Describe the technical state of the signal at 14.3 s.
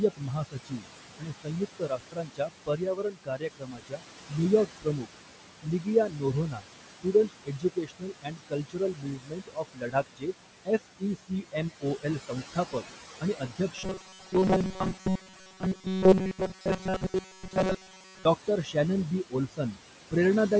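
Robotic sound from repeated short buffers covers 14.3 s, within a stretch from 13.78 s to 18.25 s. The speech turns into a rigid, metallic buzz at 188 Hz that still roughly follows the syllables. This likely comes from new audio arriving too seldom, so the same tiny slice, about 5.3 ms long, is played again and again while fresh audio is skipped. Over this stretch most of the signal is repetition rather than real speech.

Speech cut by the noise suppressor is also in effect at 14.3 s, part of a span from 0.16 s to 18.76 s that adds up to around seven seconds of affected speech. Parts of the speech are being mistaken for background noise and pushed down along with it, by up to about 19 dB. Soft consonants and word endings sound swallowed or faint.

Noise suppressor artifacts run through the whole clip and are present here too. The background is cut by about 18 dB, band by band and frame by frame, so it sinks in pauses and comes back under the speech. 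The room noise sits about 11 dB below the speech, and the call microphone processing takes out only the lowest bass.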